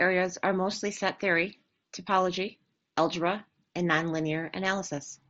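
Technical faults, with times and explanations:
No technical faults detected.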